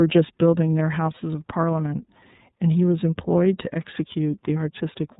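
Speech runs through the iLBC codec for its whole length, with plainly audible damage: nothing above 4 kHz survives, and each frame is coded independently, leaving a rough, slightly synthetic edge. The frame rhythm points to the 30 ms mode, which fits a bitrate near 13.33 kbps.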